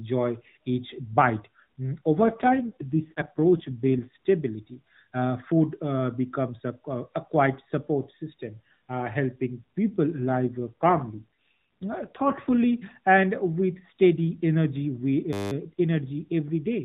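From 2.16 to 4.09 s and again from 10.20 to 12.58 s there is an AMR rate drop. The speech turns rougher, buzzier and more synthetic, which fits the codec stepping down from 12.2 to about 5.9 kbps. Fewer bits describe the vocal tract, while the rest protect against radio errors. Unlike a dropout or a switch to a narrower band, the bandwidth stays the same and there is no gap. Only the texture coarsens, and it recovers when the rate climbs back.

At 15.33 to 15.52 s a system hang loop appears. The sound hardware kept replaying one 10 ms piece of its ring buffer while the system froze, so the same fragment repeats exactly, roughly nineteen times. At a 100 Hz repeat rate this is heard as a steady buzz rather than a stutter. It differs from packet-loss concealment because the repeats are identical, not fading or smoothed, and almost no audio goes missing.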